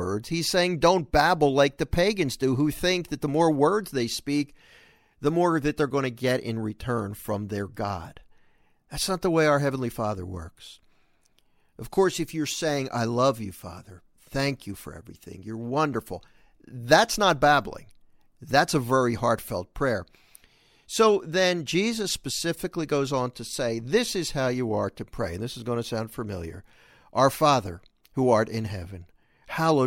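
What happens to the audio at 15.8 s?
Nothing goes wrong at 15.8 s: the speech runs straight through that moment with no audible fault.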